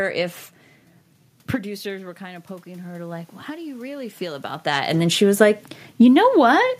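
From 1.61 s to 4.55 s, automatic gain rising follows an input drop of about 16 dB as the talker moves back. The gain climbs about 10 dB until just before "that and then she". Unlike a talker's movement alone, the room noise swells along with the voice.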